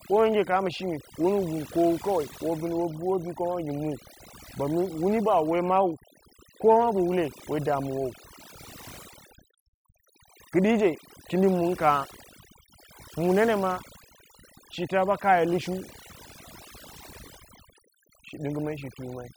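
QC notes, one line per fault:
throughout: overdone noise removal. Noise reduction applied far too hard has pulled individual frequency bands down or out wherever they sat near the estimated noise floor, taking quieter speech detail with them, so the background drops and breaks up into twinkling specks.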